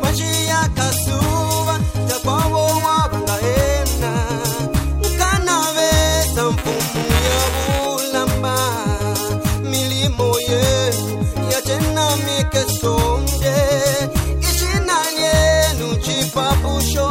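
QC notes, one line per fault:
6.57–7.86 s, buffer tearing: a rattling, robotic buzz at about 345 Hz rides on the sound for just over a second, present only while signal is there. It fits a 128-sample buffer where writer and reader have slipped and cross every period, so a small slice of each buffer replays audio roughly 10 ms old, with hard joins either side. On a spectrogram, vertical striations repeat at that rate; the waveform shows regular discontinuities.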